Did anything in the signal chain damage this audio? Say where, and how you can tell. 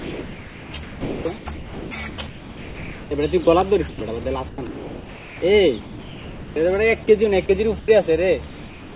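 Yes, at the call-processing stage. From the start to 3.11 s, and again from 3.89 to 5.42 s, the sound is chopped by the voice detector. Edges keep flipping to a smooth synthetic hiss, roughly 2.5 s and 1 s of fill in total. That's likely the sender's detector gating transmission on and off.

There's also sound dropped by the voice detector at 3.44–3.47, 5.81–6.56, 7.46–7.49, 7.79–7.88, and from 8.48 s to the end. Each time the sound gives way to steady comfort noise. Everything sits under 4 kHz, as you'd expect from a narrowband G.711 path.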